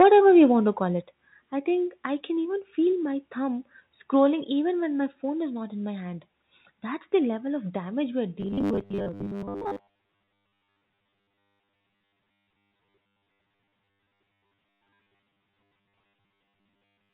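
The first 0.08 s carries microphone overload. Peaks run about 4 dB past the converter's ceiling. Around 7 percent of samples have their tops flattened. That gives the opening a harsh, crackling edge. The likely cause is an input volume set too high, driving the loudest moments into the converter's hard limit.

Then comes the microphone volume stepped down, three times. At 0.02 s the level falls by about 3 dB. At 1.02 s it falls again, by about 6 dB. At 5.1 s there is a smaller drop of about 2 dB. Each change is instant. Voice and background sink together. The likely cause is call software reacting to the overloaded input by lowering the device gain in single steps.

From 8.41 s to the end, the sound becomes robotic from repeated short buffers. A rigid, metallic buzz at 100 Hz sits over everything. It still tracks the speech loosely. That pitch fits a 10 ms buffer being replayed over and over. 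Roughly two thirds or more of this stretch is repeated material rather than fresh audio. The likely cause is audio arriving too seldom, with the gaps filled by copies. All of this passes through the G.711 A-law call path, which leaves nothing above 4 kHz.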